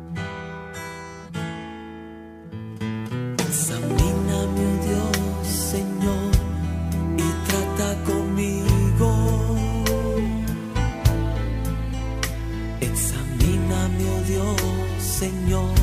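No technical faults can be heard in the audio, so there is nothing to describe.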